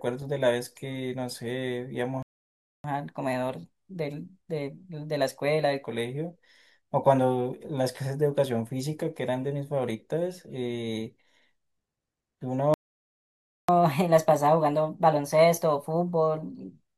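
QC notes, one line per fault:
2.23–2.84 s, playback stall: the speech cuts to silence mid-flow for about 0.62 s. The gap most likely comes from the player running out of buffered data or its audio thread being blocked until it recovered.
2.84–5.84 s, catch-up at higher speed: right after the gap, the speech runs at 1.1 times normal speed and sounds about one and a half semitones higher. The player is resampling its backlog faster to win back the time lost in the stall.
12.74–13.69 s, playback stall: a longer dropout, about 0.95 s of silence. The likely cause is again the player starving for data or being held up, leaving the output silent.
13.69–16.69 s, catch-up at higher speed: the speech plays at 1.15 times speed, roughly two semitones sharp, for three seconds. Here the player resamples its backlog more aggressively, so the speed and pitch rise more than after the first gap.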